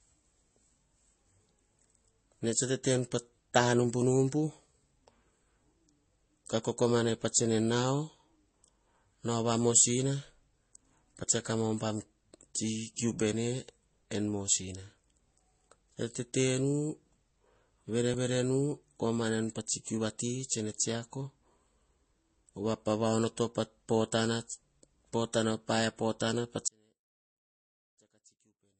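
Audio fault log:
throughout: transcoding between lossy codecs. The speech carries two layers of coding damage at once. Nothing is present above 8.3 kHz, so the top end sounds dull and closed in. Over that sits a mix of swirly, watery smearing and a grainy roughness. These textures do not come from one encoder. They point to a low-rate MP3 stage later re-encoded as Vorbis at a similarly low rate. The lowest band limit in the chain survives. The second encoder likely spent its bits on the earlier artefacts and added its own.
11.24 s: dropped buffer (overrun). The speech jumps forward at that instant. There is no gap of silence. Roughly 20 ms of sound is missing, and the two sides are butted straight together. The likely cause is that the audio was not read from the capture buffer in time, so the hardware overwrote that block before it was saved.
26.68 s to the end: audio dropout to a faint residue. 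The speech cuts out abruptly in mid-flow and does not return before the clip ends. It does not fade and it is not a pause. What remains is only a faint trace of the sound, around 35 dB below its normal level. So the path after the break stayed live while the main signal was lost. A likely cause is a break early in the chain that let only a weak leak of the signal through.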